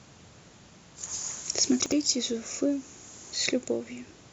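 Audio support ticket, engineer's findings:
Chunks out of order, 1.8–1.92 s: brief jumbled stutter. One 60 ms chunk lands one slot late, swapping order, so three hard joins. Buffering/reassembly stage.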